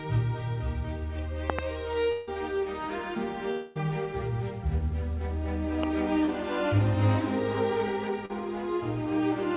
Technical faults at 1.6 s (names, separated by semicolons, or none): loud pop